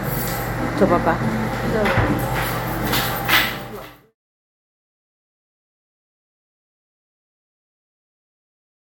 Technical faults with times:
none

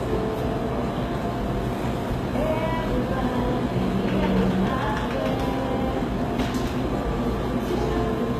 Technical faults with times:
0.00-8.39 HE-AAC compression

